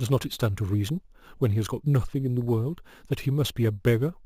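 Throughout, imaging from sample-and-hold upsampling, 16 kHz to 44.1 kHz without smoothing, adds an 8–16 kHz metallic fizz, about 25 dB down, that follows loudness, unlike hiss.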